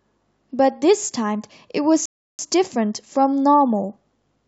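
A speech recording with one rebuffering stall: at 2.06 s the sound drops to silence and picks up again at 2.39 s exactly where it left off. The player ran dry of downloaded audio, so nothing's missing, but about a third of a second of dead air gets added.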